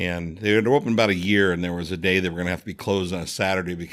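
No technical faults are audible anywhere in this speech clip.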